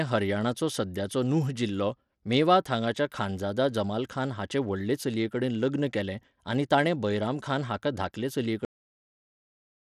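From the start, the speech carries plainly audible damage that sounds like Bluetooth SBC compression, likely from a low-rate link, around 96 kbps. With so few bits, the top sub-bands starve. Treble flickers, and a gritty, aliased noise clings to the speech. Content reaches about 20.9 kHz.

At 8.65 s, right after "ताणें बैरामखान हाका धाकले", a cut-off end occurs. The final buffers never played. The sound stops mid-sound, with no natural decay, and falls straight into digital silence for the remainder.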